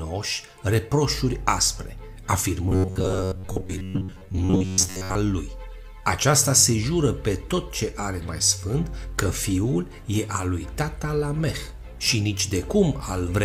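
From 2.69 to 5.15 s, a rigid metallic 94 Hz buzz: robotic sound from repeated short buffers, likely an 11 ms slice looping in place of skipped audio.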